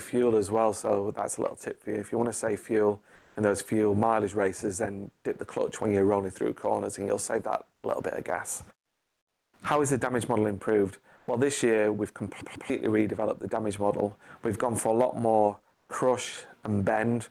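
At 3.15 s the real background drops out for about 200 ms and a smooth, detail-free hiss takes its place, sitting about 3 dB lower. That's comfort noise in place of the background, likely from Opus DTX: the sender goes quiet during pauses and the receiver fills in synthetic noise. It happens again at 8.81 s for 720 ms (about 5 dB down), at 11.17 s for 100 ms (about 3 dB up), and at 15.75 s for 140 ms (about 6 dB up).

Between 12.41 and 12.70 s there's a CD stuck on one turn. The laser jumps back to the same spot and replays a 144 ms slice twice, with a tiny mute at each jump. You get that quick, even stutter of a skipping disc before playback moves on.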